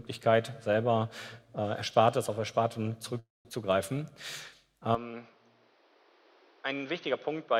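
From 3.19 to 3.47 s a call audio freeze, likely from delayed packets, fades into near-silence before the sound resumes where it stopped, leaving a flat gap in the waveform.

At 4.95 s the input likely switched to a poorer device: it is duller and a few dB quieter, the spectrogram empties above 6.2 kHz, and a faint new noise floor appears.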